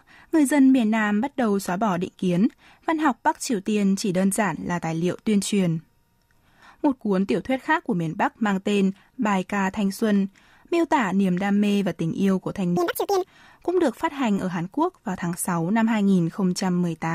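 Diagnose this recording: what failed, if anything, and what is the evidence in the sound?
The sample-format conversion stage failed briefly: the audio was read two samples at a time, producing double speed. From 12.77 s to 13.25 s the speech runs at 2.0 times normal speed and jumps an octave higher. The reader treated each pair of samples as a single frame, as if expecting two channels or samples twice as wide, so the material was consumed twice as fast.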